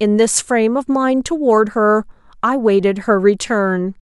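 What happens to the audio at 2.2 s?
Nothing goes wrong at 2.2 s; the speech carries on intact through that moment without any dropout, click, glitch or other technical fault.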